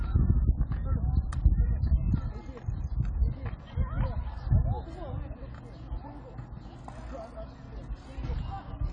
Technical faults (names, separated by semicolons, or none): AAC compression